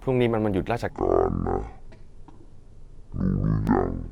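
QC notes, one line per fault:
0.90 to 4.12 s, section at the wrong speed: from here to the end, the audio is likely being played against the wrong clock, running at half the speed it was captured at. Because playback rate governs both timing and frequency together, the speech suddenly stretches out and drops by roughly ten semitones, turning deep, slow and heavy from 0.90 s onward instead of easing in gradually.
3.67 s, damaged data in a compressed stream: part of the encoded stream is corrupt, so the decoder misreads the affected frame, loses its place and hunts for the next valid frame header before resuming. The result is a brief glitch lasting only a few milliseconds, heard against the already slowed, lowered speech.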